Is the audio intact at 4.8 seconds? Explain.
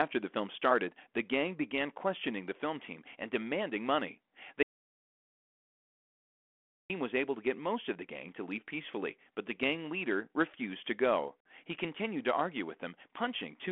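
No. An audio dropout to silence runs from 4.63 to 6.90 s, likely from a lost input written as silence, leaving 2.27 s of dead silence with no room tone.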